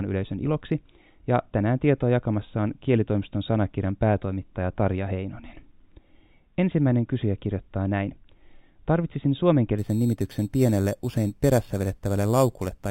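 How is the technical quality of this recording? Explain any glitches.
The recording is clean until near the end, where one fault appears: imaging from sample-and-hold upsampling, from 9.78 s to 12.90 s. In that stretch each sample appears to have been repeated to reach a higher rate, with no smoothing filter afterwards, which fits an 8 kHz stream being raised to 48 kHz. Mirror copies of the speech spectrum fold up around multiples of the old rate, the first filling 4 kHz to 8 kHz at about 22 dB below the signal. It sounds like a bright, metallic fizz riding on the speech and rising and falling with its loudness. On a spectrogram, a reflected copy of the lower bands appears above 4 kHz, running opposite to the pitch contours. The waveform shows small flat steps.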